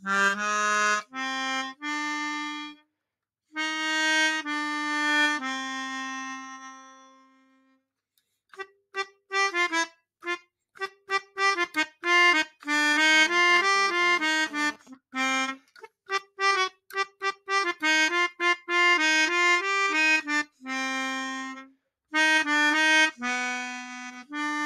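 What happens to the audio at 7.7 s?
At 7.7 s the sound is cut by the noise suppressor. The fault runs from 6.57 s to 7.82 s, affecting roughly a second and a half of audio. The suppressor treats this sound as unwanted noise and pulls its level down harder than everything around it. At its deepest the drop reaches about 19 dB. The sound sinks in level.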